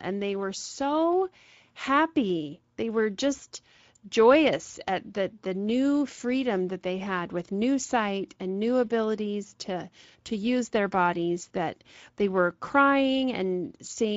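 Speex codec damage runs throughout the speech: too few bits for the excitation leave the speech plainly noisy and hoarse, consistent with a middling Speex setting.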